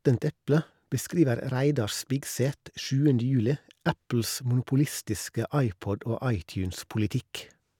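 No technical faults can be heard anywhere in the recording. The speech runs without any interruption or disturbance worth describing.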